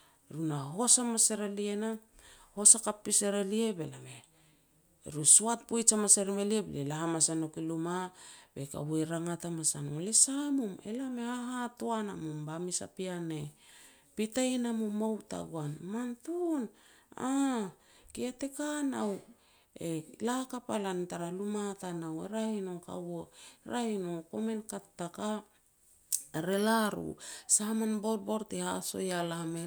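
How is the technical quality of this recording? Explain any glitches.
No technical glitches can be heard in this speech recording. There is nothing further to explain about its quality.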